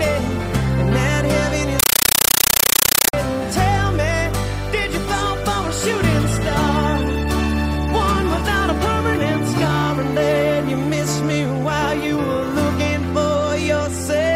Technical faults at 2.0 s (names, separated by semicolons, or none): compressed stream played as audio